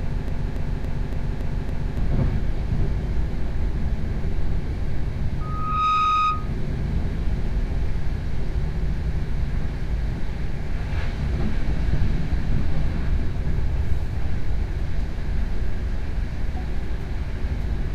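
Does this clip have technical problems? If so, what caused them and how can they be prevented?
Yes. A broken-record loop is already running when the audio begins: a 0.28 s fragment repeats exactly six times until 1.98 s. This was likely caused by a stalled player or stream resending its last buffer. On a spectrogram it shows as identical blocks recurring every 0.28 s. Adequate buffering and stall detection that mutes rather than repeats would prevent it.

A loudspeaker feedback squeal runs from 5.40 to 6.55 s. A 1.2 kHz tone swells over about half a second to roughly the level of the surrounding sound. On a spectrogram it appears as one bright horizontal line at 1.2 kHz. Keeping microphones away from and behind loudspeakers, and lowering gain or notching 1.2 kHz, would prevent it.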